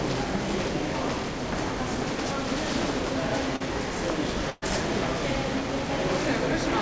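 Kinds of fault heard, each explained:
Short concealed packet loss: at about 3.56 s roughly 40 ms of audio never arrived in time, and the receiver papered over it by carrying the last sound forward for about 41 ms before easing back into the real signal. You hear it as a quick smear or little wobble in the sound.
Burst of packet loss: from about 4.50 to 4.64 s a run of roughly 120 ms went missing all at once. The decoder stretched what it had for about 118 ms, letting it fade as the gap wore on, so you get a held, dulling tail instead of silence, then the audio picks up further along with that stretch simply gone. Heard through the call path's G.722 coding, with nothing above 8 kHz.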